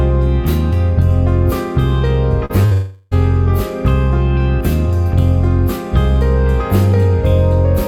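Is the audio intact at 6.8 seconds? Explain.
Yes, at 6.8 seconds the audio is intact, with no dropout, click, distortion or other fault audible at that point.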